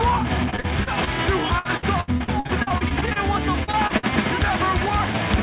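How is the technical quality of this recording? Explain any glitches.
The recording has repeated packet loss, heard as choppy, robotic sound from 0.5 to 1.09 s, 1.59 to 3.18 s and 3.64 to 4.05 s. Packets kept arriving late or not at all. Each hole was filled by extending the previous sound. About a fifth to a third of each stretch is patched, with gaps up to 71 ms. The result sounds broken. Nothing above 4 kHz comes through, which points to a narrowband telephone codec.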